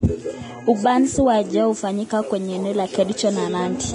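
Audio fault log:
throughout, Vorbis compression: nothing gets through above 10.6 kHz, and the treble that's left is hissy and grainy, with smeared consonant attacks. That's likely heavy Vorbis coding, and the damage level points to a low bitrate around 30 kbps, where fine high-frequency detail gets swapped for noise of similar energy.
1.71 to 3.10 s, unreliable data bit: a steady crackly fizz sits over the speech for this stretch and carries on through the gaps too. It sounds like one marginal data line flipping its bit in random samples, so each error lands as a same-sized spike.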